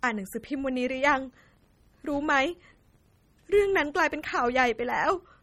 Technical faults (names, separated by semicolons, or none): MP3 compression; filter restarted on every block